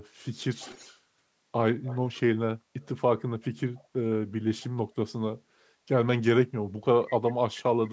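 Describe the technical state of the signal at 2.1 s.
At 2.1 s there is an echo leak from 1.84 to 2.2 s: a faint, discrete copy of the speech 133 ms late, likely from a loudspeaker's imperfect echo cancellation, rather than reverb's smooth decay.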